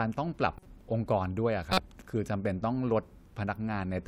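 Corrupt frames decoded at 0.57 to 0.66 s and 1.70 to 1.78 s: damaged bits in a few compressed frames were decoded anyway, misplacing energy. The first is faint, near -35 dBFS; the second is loud, near -10 dBFS.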